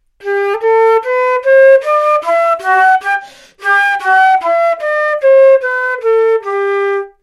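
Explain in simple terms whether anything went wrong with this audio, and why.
Nothing went wrong here; no faults can be heard.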